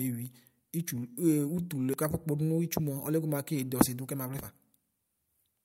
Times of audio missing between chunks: 1.94, 4.39

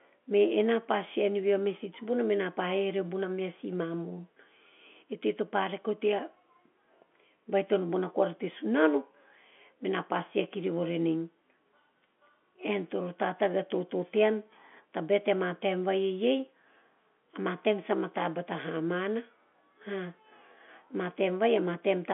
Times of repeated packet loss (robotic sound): none

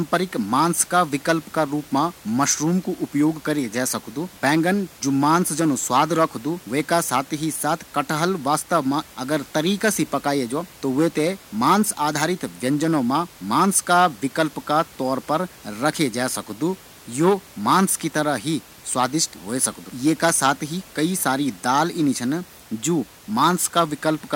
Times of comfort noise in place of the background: none

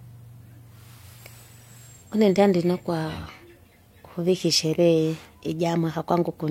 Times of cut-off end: none

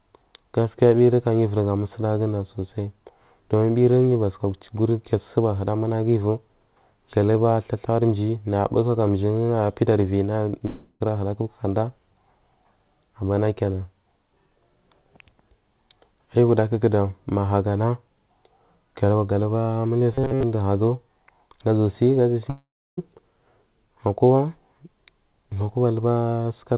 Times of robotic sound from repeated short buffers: 20.13-20.43

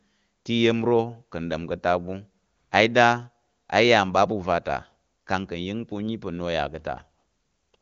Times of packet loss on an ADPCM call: none

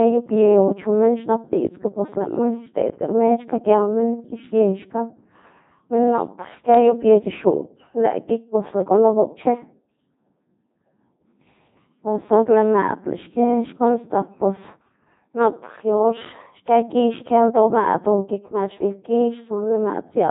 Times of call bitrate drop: none

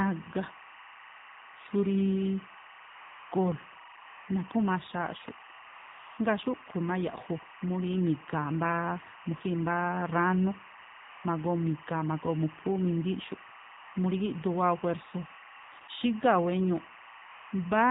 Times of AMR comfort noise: 2.90-3.32, 3.98-4.28, 5.68-6.18, 11.02-11.24, 13.78-13.94, 15.64-15.88, 17.24-17.52

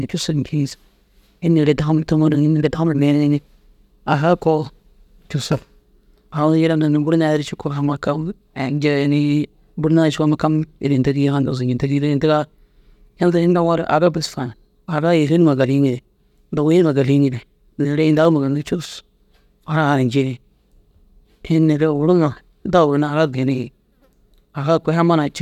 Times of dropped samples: 18.25

